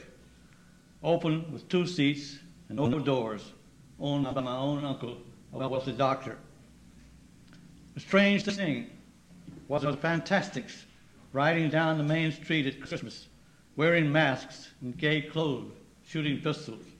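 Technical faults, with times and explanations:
2.77–2.98 s, 4.24–4.42 s, 5.59–5.77 s, 8.42–8.62 s, 9.78–9.94 s and 12.86–13.00 s: frames out of order. In each stretch, two neighbouring blocks of audio play in swapped order. Each block is about 80 ms long, except the last pair, which is about 60 ms each. The sound jumps forward and then back, so it comes out as a brief garbled flutter. Nothing is missing, and the timing recovers immediately after.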